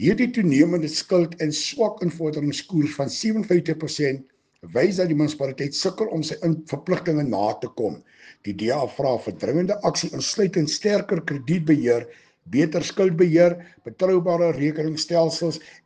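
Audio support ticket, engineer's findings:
No faults found on listening review. No component action required.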